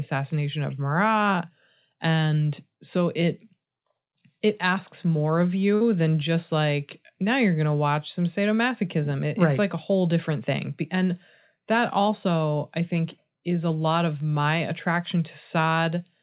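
At 5.75 s to 5.83 s a burst of packet loss cuts into the speech. For about 53 ms the last sound is carried on and faded, then the audio resumes about 60 ms further along. Unlike a plain dropout, the gap is filled rather than silent, and nothing is ever heard above 4 kHz, consistent with a narrowband G.711 call path.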